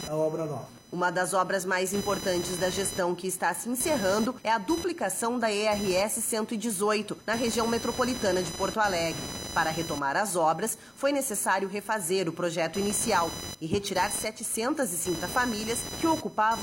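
From the start to the end, a buzzing, chirping layer sits under the sound. It is computer activity noise. Load changes in the processor, graphics card or mouse shift the ground that the audio circuit shares. That current leaks into the signal as a fast pulse train, here around 1 kHz. It is loud, roughly 10 dB below the wanted sound. It follows the computer's work, not the audio itself.

At 15.14 s, a short burst of damage breaks in and lasts until 15.20 s. This is damaged data in a compressed stream. Some bytes in that part of the file were lost or overwritten. The decoder misread those frames and lost its place. It then searched for the next valid frame header. For about 60 ms the output is garbled. Clean decoding returns once sync is found again.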